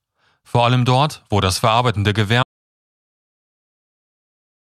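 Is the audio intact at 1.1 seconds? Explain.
Yes, at 1.1 seconds the speech plays through cleanly, with no audible fault at that moment.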